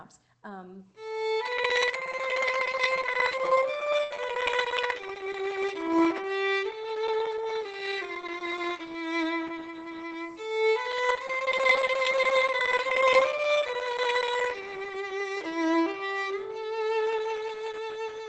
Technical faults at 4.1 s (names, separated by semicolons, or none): burst of packet loss; lost packet rebuilt from error correction